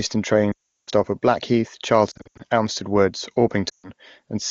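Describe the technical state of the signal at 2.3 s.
At 2.3 s the speech sits inside a burst of lost AMR speech frames running from 2.11 to 2.41 s. About 200 ms of frames drop out, scattered across roughly 280 ms, with the longest unbroken run 80 ms. The wideband decoder fills each gap by repeating the last good pitch and vocal-tract settings at falling gain. The sound goes smeared and warbly, thins quickly, then returns briefly rough. Unlike a hard dropout, it is never abrupt digital silence.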